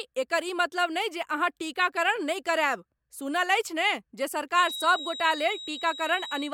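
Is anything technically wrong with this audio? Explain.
Yes. A feedback whistle starts at 4.54 s and lasts to the end. It is a thin, steady 3.8 kHz tone, about 10 dB under the speech. Its level swells and fades slowly. A loudspeaker-to-microphone loop is likely held just short of runaway.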